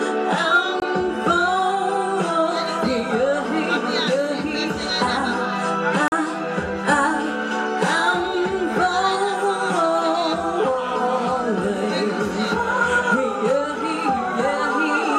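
At 0.80 s and again at 6.08 s, the sound drops to a block of digital silence, 20 ms and then 40 ms long. The samples were replaced by zeros, with no fade. Both are heard as short holes.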